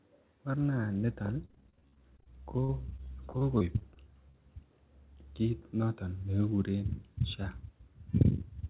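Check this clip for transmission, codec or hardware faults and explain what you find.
There's one clear transmission fault here: a stretch of repeated packet loss giving that robotic sound, heard through a narrowband call path with nothing above 4 kHz, which fits G.711 mu-law at 64 kbps.

From 1.42 to 4.36 s, right after "morna niton", the speech keeps breaking up. Packets went missing over and over, and the receiver patched each hole by stretching out the last bit of sound it had. Those patched bits add up to about 18% of that span, with no single gap longer than 44 ms. The constant stop-and-patch gives a choppy, robotic quality, with small pieces of the speech missing.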